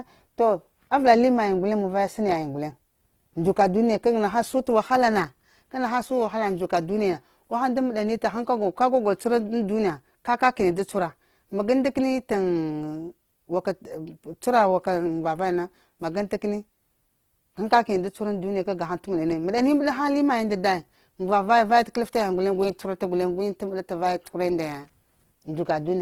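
A speech clip with Opus compression damage throughout, plainly audible from start to finish. The sound is rough and grainy, with tonal parts of the speech turned noisy. The damage likely comes from Opus in its music (CELT) mode at a low rate, which fits about 16 kbps. Short of bits, the encoder keeps each band's energy but fills the detail with folded or noise content. Bandwidth stays full, reaching about 20.2 kHz.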